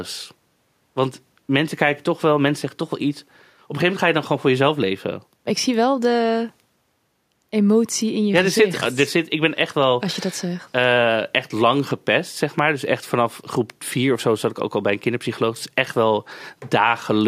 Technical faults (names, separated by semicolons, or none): none